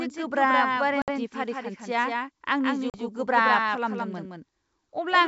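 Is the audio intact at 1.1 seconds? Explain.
No. Packet loss on an ADPCM call hits 1.02 to 1.12 s. About 60 ms of audio, a few packets' worth, drops to hard-edged silence. Because the decoder's adaptive predictor and step size have drifted from the sender's, speech resumes around 1.1 s slightly distorted before it settles.

A doubled audio track also runs through this moment. A full-band copy trails roughly 150 ms behind and about 5 dB quieter, with no decay or room colour, likely from a second, slower capture path mixed back in.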